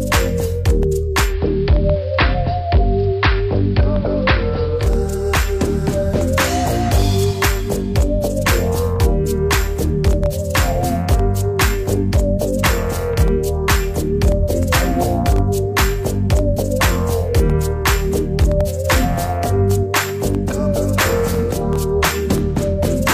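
From 1.20 to 4.90 s the sound turns dull under faint hiss: digital radio blending to analogue AM, cross-faded over 161 ms.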